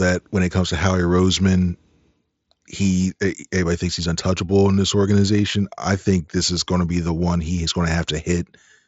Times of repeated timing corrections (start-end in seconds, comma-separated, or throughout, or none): none